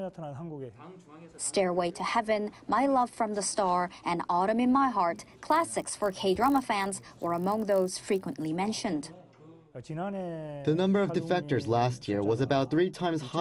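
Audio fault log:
5.14–8.46 s, resampler restarted on every block: each 20 ms block was converted alone, so edge errors repeat as a 50 Hz buzz beneath the sound.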